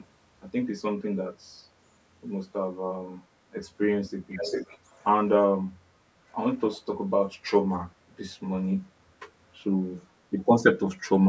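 Echo leak in this speech at 4.3–5.05 s and 6.55–6.75 s: a copy delayed by 394 ms returns, about 10 dB down, then faintly, likely loudspeaker pickup the echo canceller missed.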